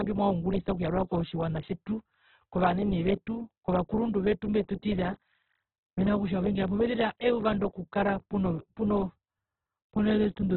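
Opus compression, throughout: the speech stops at 4.2 kHz and sounds heavily grainy and rough, which likely points to Opus music mode at roughly 8 kbps.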